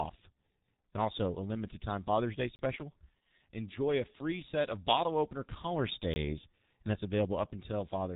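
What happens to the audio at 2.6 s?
From 2.56 to 2.59 s there is a block of digital silence: 30 ms of samples set to zero, cut in and out with no fade. It sounds like a short hole, unlike packet-loss concealment, which fills the gap with smeared sound.

Underneath, the G.723.1 codec at 6.3 kbit/s shapes this moment as it does the whole clip: nothing above about 3.8 kHz, plus a hoarse, blurred texture from its coarse voice model. That texture is what separates it from simple low-pass filtering.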